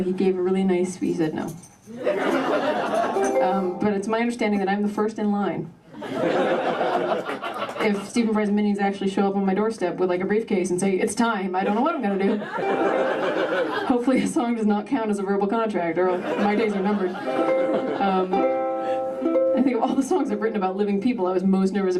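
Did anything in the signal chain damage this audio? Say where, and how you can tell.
No, nothing along the chain from capture to playback has left an audible mark on this audio.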